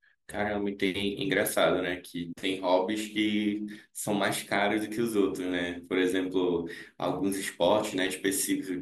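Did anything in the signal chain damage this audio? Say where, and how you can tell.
No, nothing in this speech recording stood out on listening as damage from any stage of the signal chain.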